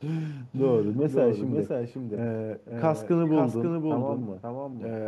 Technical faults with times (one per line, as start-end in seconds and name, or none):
0.00-5.07 doubled audio track